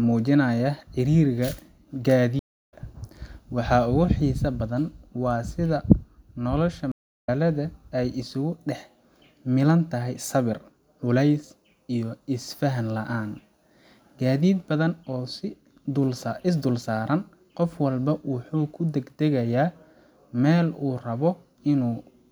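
Speech with two stream reconnects, at 2.39–2.74 s and 6.92–7.29 s: the audio drops out for 318 ms and 348 ms, then a fresh decoder resumes about a third of a second further on, skipping material. Each shows as a flat waveform and blank spectrogram gap.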